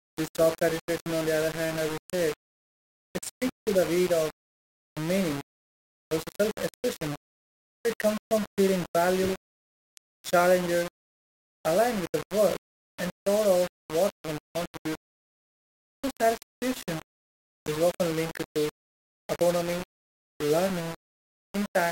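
From start to finish the speech carries low bit depth without dither, most likely a rounding to about 4 bits. With so few levels the rounding error tracks the signal, giving a grainy, rasping distortion that shifts with each syllable, roughly 15 dB below the speech itself. Quiet tails collapse to silence or sputter between two steps. A waveform shows visible staircase steps, and a spectrogram shows broadband hash that rises and falls with the speech rather than a steady noise floor.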